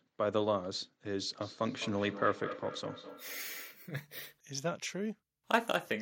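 Speech, with feedback echo between two devices from 1.4 to 3.86 s: the sound returns at roughly a fifth of a second, peaking about 12 dB below the speech, because a second device in the room replays the call into this microphone, beyond its echo canceller's reach. A spectrogram shows fainter copies of each burst offset by that gap.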